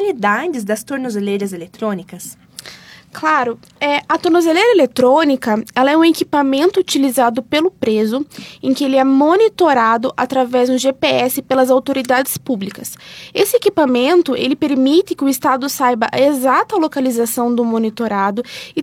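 Nothing in the audio stands out as a technical fault.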